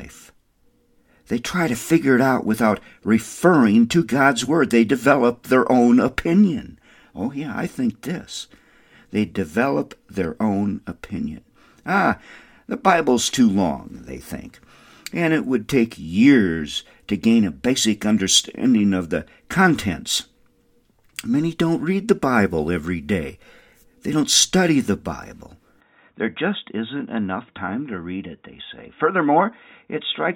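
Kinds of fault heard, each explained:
Input switched to a poorer device: from 25.81 s the speech turns dull and somewhat quieter with no gap, nothing above 3.8 kHz, likely a narrower-band input device.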